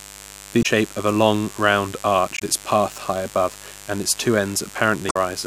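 Mains buzz runs through the whole of this speech clip: a raspy, steady 50 Hz buzz sitting roughly 20 dB below the speech, its sharp switching spikes from a dimmer, rectifier or unshielded lead spraying harmonics up into the kilohertz range. Damaged data in a compressed stream causes short glitches at 0.59–0.66 s, 2.34–2.42 s and 5.07–5.16 s, where corrupted bytes make the decoder misread frames, lose sync and skip ahead to the next frame header it can find.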